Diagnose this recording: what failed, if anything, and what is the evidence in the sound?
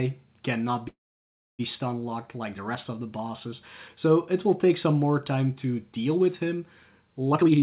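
From 0.88 to 1.61 s the sound stalls. A brief fading continuation leads into about 0.64 s of silence, then the sound resumes exactly where it left off, with nothing lost. This is likely a call audio freeze at the network and jitter-buffer stage, where late packets drained the buffer. The waveform shows a flat gap and the spectrogram a blank vertical band.

From 7.32 s to the end, the sound runs at roughly 195% speed with its pitch unchanged, shedding around 0.3 s of material. This jitter buffer speed-up comes from the receiver trimming repeated pitch-period slices to cut accumulated delay. The spectrogram shows compressed time with steady harmonic spacing, all below the 4 kHz ceiling that points to a narrowband codec such as G.711.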